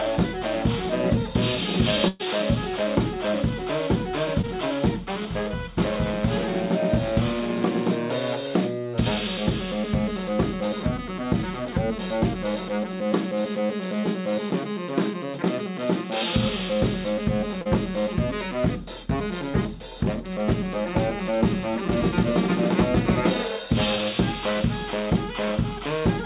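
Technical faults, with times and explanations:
2.08 to 2.21 s, burst of packet loss: the sound stalls into a held, steadily fading continuation for about 114 ms, then jumps ahead with about 120 ms of audio gone. Several consecutive packets were lost, and the receiver stretched the last sound while lowering it until real audio resumed.
4.41 s, 17.62 s and 19.51 s, short concealed packet loss: each is a brief smear or wobble over 20 to 40 ms of missing audio, heard within a band that stops at 4 kHz. Late packets left small holes that the receiver filled by extending the preceding sound, then blended back into the real signal.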